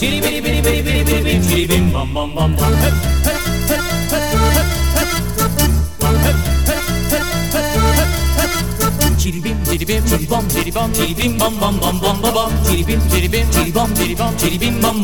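No technical faults can be heard anywhere in this recording.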